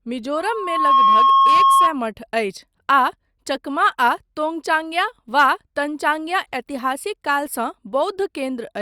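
From 0.35 s to 1.96 s, a loudspeaker feedback squeal sounds over the speech. A microphone is re-amplifying its own loudspeaker, and the loop runs away at 1.1 kHz. The pure tone swells over about half a second. It then sits roughly 10 dB above the speech.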